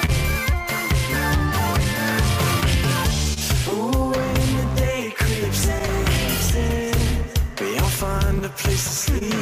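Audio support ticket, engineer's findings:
Clock drift between sender and receiver, whole clip: recurring small timing hiccups at uneven intervals. Sender clock runs roughly one percent slow; jitter buffer drains, receiver repeats or stretches short pieces.

Short stall from a late packet, 0.05–0.10 s and 9.18–9.23 s: sound held about 25 ms each time, slight buzz or dip. Buffer ran empty, last sound stretched, nothing lost.

Scattered short gaps, 1.84–3.38 s: about three brief ticks or smears, longest roughly 30 ms, around 50 ms concealed in total. Lost or late packets patched by continuation.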